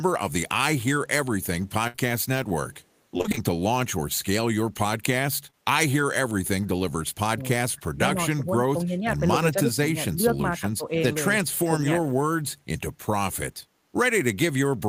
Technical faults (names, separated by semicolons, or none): burst of packet loss; short concealed packet loss; repeated packet loss (robotic sound); speech suppressed in double talk